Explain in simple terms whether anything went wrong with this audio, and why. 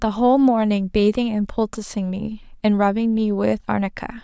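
Nothing went wrong here: the speech signal comes through steady and intact, with no technical problems to be heard at any point.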